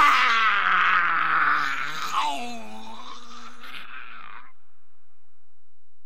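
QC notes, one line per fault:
throughout, DC offset: the entire waveform rides on a constant shift of about -30 dBFS instead of centring on zero, so the sound itself carries no audible trace of it, but positive and negative peaks are no longer symmetric and part of the available headroom is spent before any signal arrives. On a waveform view the trace sits visibly off the centre line; a spectrogram shows a steady, unbroken band pinned at 0 Hz along the bottom edge.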